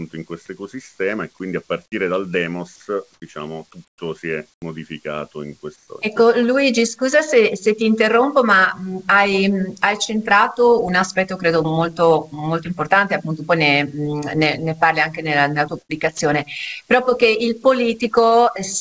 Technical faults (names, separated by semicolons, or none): comfort noise in place of the background; burst of packet loss; sound dropped by the voice detector